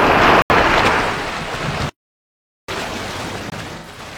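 At 0.42 s a block of digital silence replaced the audio, an 80 ms hole from 0.42 to 0.50 s. The same fault returns at 3.50 to 3.52 s, where the 20 ms gap lands as a short hole.

From 1.89 to 2.69 s the player likely ran short of data or had its thread blocked, a playback stall. The sound halts mid-flow for about 0.79 s of silence, then resumes.

Between 3.78 and 4.01 s, AAC frame loss with concealment: the decoder patched missing frames from the last good spectrum. Around 128 ms is rebuilt across roughly 0.3 s, which fits about three lost frames, heard as smeared, phasey patches, the longest near a tenth of a second.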